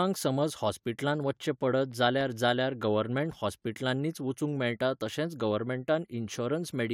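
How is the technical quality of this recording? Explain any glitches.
Pretty clean apart from one short patch of CD scratch ticks. From 1.03 to 2.21 s, right before "जाल्यार गवर्नमँट हॉस्पीटलांनी वचूंक", there are five tiny clicks, each only a few milliseconds long, about four per second. A scratch was passing the laser on each disc rotation, and the player patched over the damaged samples.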